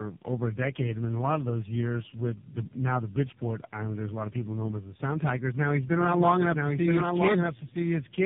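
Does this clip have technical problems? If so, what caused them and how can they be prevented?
Yes. Tandem speech coding runs throughout: the speech passed through several speech codecs in a row, ending at AMR-NB, which fits about 6.7 kbit/s, each recoding the previous one's damage, leaving rough, warbly, muffled audio with nothing above 3.6 kHz. Keeping one codec end to end, or transcoder-free operation, prevents it.

A doubled audio track starts abruptly at 5.86 s and lasts to the end: a full-band copy roughly a second behind, about 5 dB quieter, with no room colour, likely from a second, slower capture path mixed in. Muting duplicate inputs prevents it.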